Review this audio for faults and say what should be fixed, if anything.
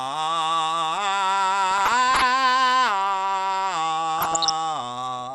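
Starved of bits, the MP2 coder likely switched off upper sub-bands throughout, leaving the music dull and gurgling, consistent with roughly 80 kbps.

Uncorrected bit errors in the DAB stream put short blips of noise into single sub-bands from 1.71 to 2.26 s and 4.18 to 4.51 s, producing DAB burbling.

To prevent both, capture from a stronger, error-free feed or a wired source, and encode at a higher bitrate or with a more efficient codec.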